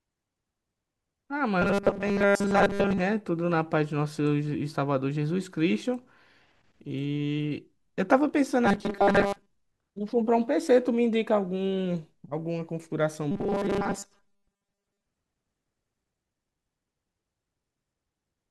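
The speech turns into a rigid, metallic buzz from 1.62 to 3.01 s, again from 8.66 to 9.50 s, and from 13.31 to 15.06 s. It still roughly tracks the words but carries a steady 200 Hz buzz. This is robotic sound from repeated short buffers, likely caused by audio arriving too seldom. Each gap is filled by looping a 5 ms slice, which sets the 200 Hz pitch, while most of the real audio is skipped.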